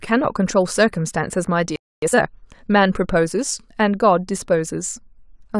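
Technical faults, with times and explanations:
1.76–2.02 s, playback stall: The player most likely ran short of buffered data, or its output thread was held up, so nothing reached the output for about 0.26 s. The speech cuts off in mid-flow and the line stays silent for that quarter of a second. When data flows again, the speech picks up where it stopped rather than skipping ahead.
2.02–2.28 s, time-compressed catch-up: Having fallen behind during the stall, the player works off its backlog by removing short slices of the signal and cross-fading the remaining pieces together, playing the material at twice its normal rate. Because slices are dropped rather than the playback being sped up as a whole, the pitch stays where it was. The speech sounds rushed for about a quarter of a second.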